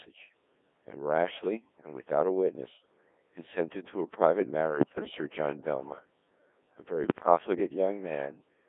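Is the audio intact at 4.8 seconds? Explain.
No. From 4.73 to 5.14 s, bit errors on digital voice radio, at roughly 7 percent, scramble the vocoder's frame parameters, so pitch, level and tone jump into warbling, bleepy gibberish rather than clean dropouts. Underneath, the Codec 2 vocoder, whose heavy buzz fits about 1.6 kbit/s, rebuilds the sound from sine waves within 250 Hz to 3.6 kHz; it is robotic but steady, unlike the burst.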